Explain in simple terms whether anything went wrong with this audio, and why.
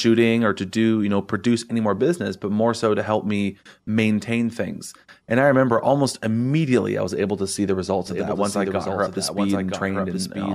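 Yes, something went wrong. From 8.07 seconds to the end, the speech is playing twice at once: a doubled audio track. A second copy runs about one second behind the first, only a little quieter. It isn't a room echo, because the copy doesn't fade away or sound roomy. It is the same clean sound repeated, and it switches on suddenly. The likely cause is the audio being recorded a second time through a slower route.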